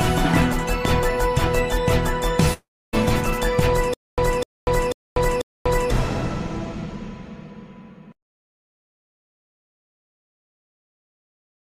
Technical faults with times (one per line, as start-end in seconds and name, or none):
2.53-2.95 long network dropout
3.94-5.91 stutter with silent gaps